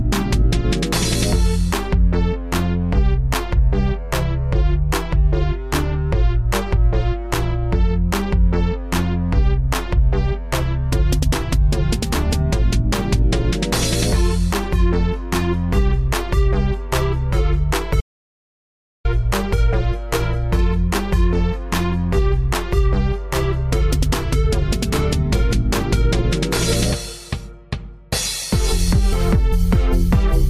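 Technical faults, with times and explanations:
18.01 to 19.05 s, audio dropout to silence: the sound stops abruptly mid-flow and resumes just as suddenly about 1.04 s later, with nothing in between, not even background hiss. The likely cause is a brief loss of the input signal while recording carried on writing silence, so whatever occurred in that second is gone. On a waveform it shows as a flat line; on a spectrogram, a blank vertical band with hard edges.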